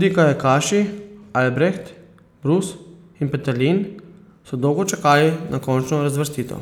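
After "so dolgo", at 4.85 s, pre-emphasis is left on: the treble boost is never cut back, about 11 dB at 10 kHz, giving thin, sibilant speech and brighter upper spectrogram bands.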